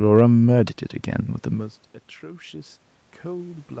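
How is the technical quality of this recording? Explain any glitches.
The recording has one clear glitch: automatic gain rising, from 2.19 s through to the end.

When the level reaching the microphone drops by about 20 dB, the automatic gain control treats the input as too quiet and raises its amplification gradually rather than in a single step. The speech and the room noise therefore swell together over more than a second, with the background lifting in step with the voice as the gain keeps climbing toward the end. The audio carries nothing above 8 kHz, which fits the band limit of the call codec.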